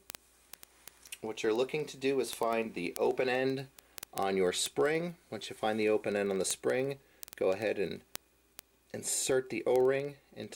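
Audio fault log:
0.1–10.53 s, word clock ticks: a steady train of sharp ticks of uneven strength, roughly twenty per second and about two hundred in all. Each is a single sample slipped where an unlocked receiver clock drifts a few hundred ppm against the sender, and that metronomic regularity separates it from random clicks or buffer dropouts.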